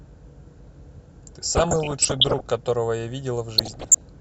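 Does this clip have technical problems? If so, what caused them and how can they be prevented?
Yes. Both problems are DAB burbling. Weak reception let bit errors slip past the error correction into the MP2 audio data, so corrupted samples put short blips of noise in individual sub-bands and corrupted scale factors threw sub-bands up or down in level for up to a frame. From 1.42 to 2.42 s, with an error rate under 1 percent, the speech is overlaid with burbling. From 3.58 to 4.01 s, errors near 2 percent make the burbling denser. Better antenna placement or a stronger multiplex signal keeps errors within what correction can repair.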